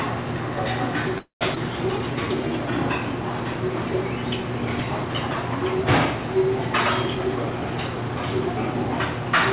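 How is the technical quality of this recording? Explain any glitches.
The recording has four timing glitches from network delivery, all within a call path that carries nothing above 4 kHz and has the grainy coding noise of a 64 kbps G.711 mu-law link.

Call audio freeze, 1.18 to 1.43 s: the jitter buffer likely ran empty while packets were held up. The last sound is stretched into a fading buzz or hiss, then about 140 ms of silence. Playback resumes where it stopped, adding roughly a quarter-second gap with nothing lost.

Skip ahead, 1.55 to 1.58 s: here the opposite happens. About a tenth of a second of audio was dropped while later audio was already queued. The two sides are spliced with only an 8 ms bridge, so the sound jumps abruptly forward.

Jitter buffer slow-down, 1.92 to 2.72 s: with the buffer running low, the receiver repeated single pitch periods and scraps of pauses to build a reserve. 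That added 115 ms, so this stretch plays at 86% speed at unchanged pitch, sounding drawn out.

Jitter buffer speed-up, 7.15 to 8.31 s: the buffer held more than its target, so the receiver cut short pitch-period pieces, removing about a fifth of a second. The audio runs at 120% speed, same pitch, sounding hurried.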